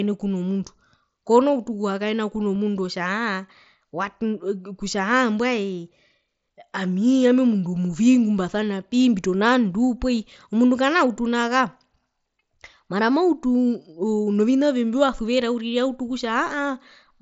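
At 2.55 s a concealed Bluetooth headset packet loss fills one lost frame of about 7.5 ms with a copy of the preceding waveform, so it slips by nearly unheard rather than as a click or a gap.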